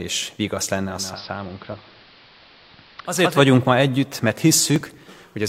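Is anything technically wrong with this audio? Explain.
Yes, two things stand out.

From 0.82 to 3.48 s there's a digital radio blending to analogue: the receiver loses digital and cross-fades over about 0.45 s to the AM feed. The level drops about 4 dB, and hiss sits roughly 25 dB down until it blends back.

Then from 4.76 to 5.35 s there's processor overload crackle. The processor keeps missing its deadlines, and each late buffer is simply skipped, leaving tiny hard-edged gaps. The rapid run of them sounds like gritty tearing, which fits something like a 5 ms buffer missing a few dozen times.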